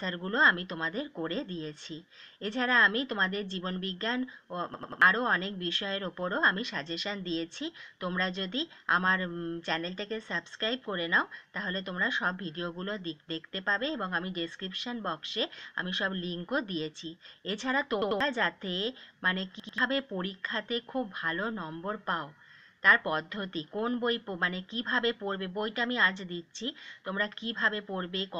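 A repeated buffer stutters the audio at 4.74–5.02 s, 18.02–18.20 s and 19.60–19.78 s, where a 93 ms slice replays three, two and two extra times with hard joins, which fits a 4096-sample buffer. Unlike a dropout, no silence appears.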